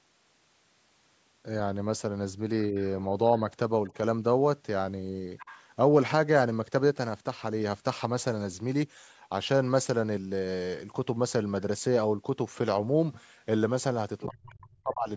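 At 2.7 s and again at 3.88 s the speech dips by roughly 10 dB for a few tens of milliseconds. These are brief cases of speech suppressed in double talk, likely from the echo canceller turning the talker down while the other side was also talking.

From 5.38 to 5.59 s a faint second voice sits well under the talker, and a shorter scrap follows at 14.2 s, a little louder. This is the other side's voice leaking through, likely loudspeaker echo that the canceller failed to remove from the microphone.

Straight after, from 14.27 to 15.1 s, the speech almost vanishes, dropping by around 40 dB. This is a much heavier case of speech suppressed in double talk, likely caused by the canceller clamping both voices at once.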